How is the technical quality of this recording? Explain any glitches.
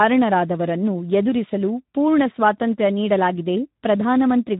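The quality is poor, with one fault running through the whole recording. The speech carries plainly audible Speex codec damage from start to finish. Speex is a CELP speech coder. It models each short stretch of voice with a vocal-tract filter and a coded excitation signal. At the rate this clip suggests, about 11 kbps, the excitation gets few bits. The voice therefore sounds noisy and hoarse. Nothing is present above 3.8 kHz, so it also sounds narrow and muffled.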